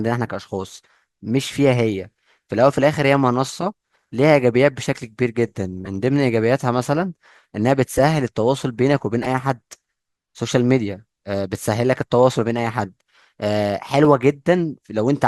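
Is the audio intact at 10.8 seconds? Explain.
Yes, at 10.8 seconds the speech plays through cleanly, with no dropout, click, distortion or other fault at that moment.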